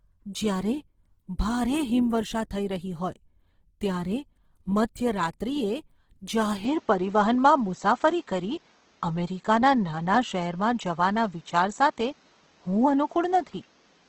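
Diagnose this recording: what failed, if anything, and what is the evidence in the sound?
The codec stage shows the damage, most likely Opus compression in its music (CELT) mode. Throughout the speech, tones come out grainy and rough rather than swirling, and the band stays full, reaching about 20.2 kHz with no narrowing. Band energies are preserved but filled with folded or noise content when bits run short, which fits a rate near 16 kbps. The scarcity of spectral holes and swirling separates it from MP3-style damage.

At the capture stage, the input was likely switched to a poorer device at 6.65 s, and the change holds to the end. From that point nothing passes above about 7.6 kHz, so the sound turns duller. The level shifts by roughly 5 dB, and a new noise floor appears about 40 dB below the signal. There is no gap at the switch. A lasting step in bandwidth, tone and noise together marks a device change, not a codec bitrate drop, which would not add a fresh noise floor.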